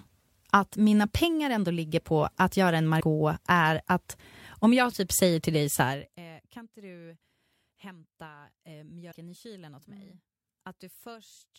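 Damaged data in a compressed stream shows up at 2.97 to 3.01 s and again at 9.08 to 9.14 s. Corrupted frames make the decoder lose sync and hunt for the next valid header, and each time a brief glitch cuts into the speech.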